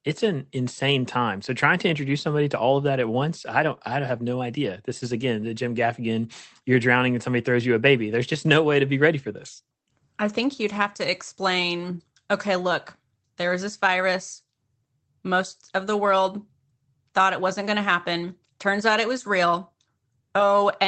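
No faults are present in the speech, with the top end stopping near 8 kHz and the coding texture being what a normal Opus call path produces.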